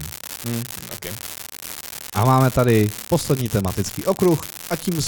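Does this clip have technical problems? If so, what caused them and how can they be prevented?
Yes. An unreliable data bit runs through the whole speech clip: one marginal data line flips its bit in a random share of samples, and each error is a step of about -8 dBFS. That fixed step gives a constant crackle that persists in the pauses. Prevent it by checking data-line connections, termination and timing margins on the converter interface.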